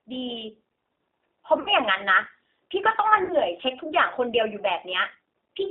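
Speech carried over a G.729 codec, with two short patches of concealed packet loss. The whole clip sits in a narrow line band of about 300 Hz to 3.6 kHz, and the voice has the rough, slightly synthetic graininess of a coder that rebuilds speech from a vocal-tract filter and a few excitation pulses per frame. That texture points to an 8 kbit/s G.729-family codec. The graininess, not just the missing highs and lows, is what separates it from a clean telephone-band filter, which would sound dull but smooth. At 1.60 to 1.70 s and again at 3.24 to 3.36 s there is VoIP packet loss concealed by the speech codec. About 60 ms of signal is missing each time, which fits a couple of lost packets. Instead of silence or a click, the decoder keeps extending the last pitch and filter at falling gain, so the sound turns into a fading buzzy or noisy smear and stays weak or distorted for a moment after the stream resumes. 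That sustained, decaying sound is what distinguishes it from a plain dropout.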